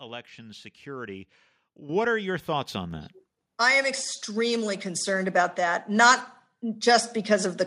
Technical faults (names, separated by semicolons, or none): microphone volume stepped up